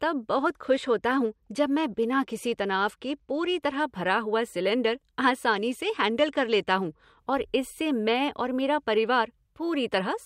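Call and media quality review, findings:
Bluetooth SBC bit pool drop, 0.37–3.82 s: treble dulls, gritty noise rises in speech. Link congestion likely forced the encoder to cut bits; top sub-bands starved, remaining bands coarsely quantised. Sound points to bit pool halved from 28 to 14, near 108 kbps.

Same SBC bit pool drop, 5.51–7.18 s: identical dull, gritty band until rate recovers. Same reduced-bit-pool signature.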